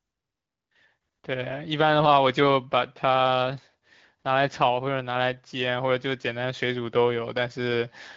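Nothing is technically wrong with this speech clip.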